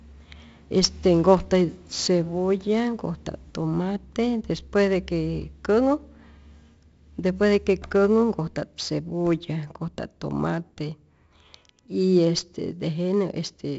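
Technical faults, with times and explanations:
Throughout: 4-bit ADPCM compression. Each sample is stored as a small 4-bit step from a prediction. The damage is heavy. Gritty hiss follows the speech level, and sharp onsets distort. Nothing sounds above 7.7 kHz, which points to 64 kbps at a 16 kHz sample rate.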